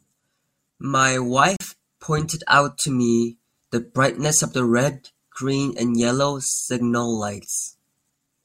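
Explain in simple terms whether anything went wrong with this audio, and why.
At 1.57 to 1.61 s the speech briefly drops to silence for about 38 ms, then carries on. This is a Bluetooth stall, likely caused by wireless interference delaying data until the headphones ran out. Unlike a click or crackle, the gap is clean silence rather than added noise.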